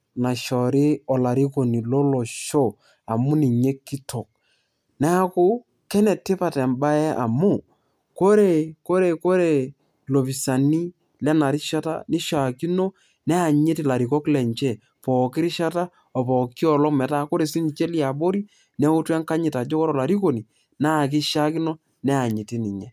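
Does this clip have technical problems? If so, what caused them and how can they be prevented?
No, nothing stood out as a technical problem on listening to this recording, so there is nothing here that calls for prevention.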